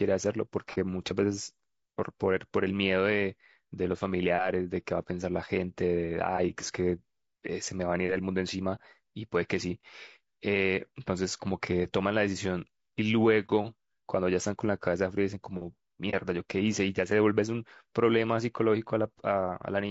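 Throughout the speech the voice sounds rough and grainy, with a hiss filling the gaps between the harmonics and a thin, synthetic top end. This is most likely low-delay AAC compression of the AAC-ELD kind used for video calls. At a rate that fits about 32 kbps the encoder runs short of bits and the damage is plainly audible.

Brief dips open at 0.74, 8.75, 13.46 and 16.10 s, each lasting roughly 35 to 50 ms. The sound fades out and back in. These are AAC frame loss with muting: in each case a single frame of about 30 ms went missing, and the decoder replaced its spectrum with silence. The overlapping windows on either side smear the edges into short fades, so the gap dips smoothly instead of cutting off sharply.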